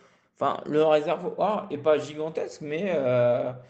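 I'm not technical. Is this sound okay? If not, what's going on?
Yes, this sound is okay, and nothing is going wrong in it.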